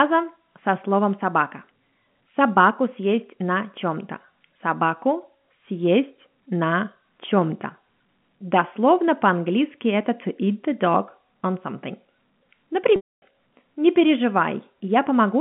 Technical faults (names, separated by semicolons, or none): packet loss with pitch repetition